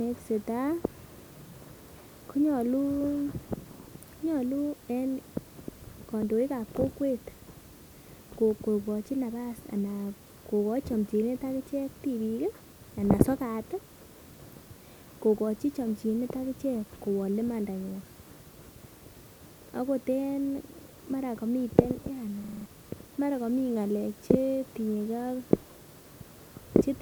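From 22.44 to 22.66 s the speech locks into a system hang loop: the machine froze while a 42.7 ms slice, which fits a 2048-sample buffer, replayed five times at 23.4 Hz. It sounds like a brief machine-gun stutter, and about a fifth of a second goes missing. Waveform and spectrogram both show identical blocks repeated side by side.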